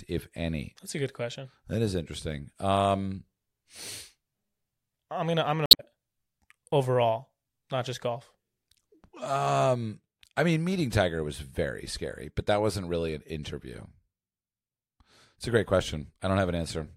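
A speech recording with damaged data in a compressed stream between 5.63 and 5.80 s, just after "I'm gonna I'm". For about 0.17 s the decoded sound turns into a glitch instead of the talker. Corrupted bytes in the compressed file or stream make those frames unreadable or wrongly decoded, so the decoder loses frame sync and scans forward for the next valid header before normal playback resumes.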